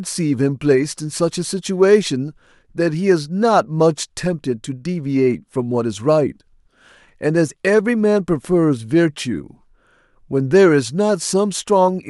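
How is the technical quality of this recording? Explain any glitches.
No glitches or technical faults are audible anywhere in the speech recording.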